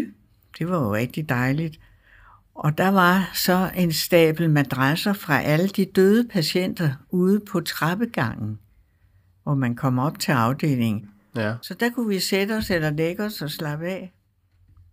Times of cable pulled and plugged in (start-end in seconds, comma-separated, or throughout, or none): none